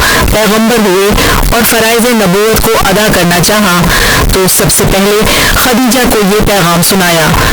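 A speech recording, but the whole thing has turned into a loud, buzzy, nearly square-wave blast sitting at an almost fixed, high level, with the background noise every bit as loud as the talker. You can still follow the pitch of the voice. That's the classic float read as integer sound, likely from 32-bit float samples being read as 32-bit integers, so sign and exponent bits end up setting the level.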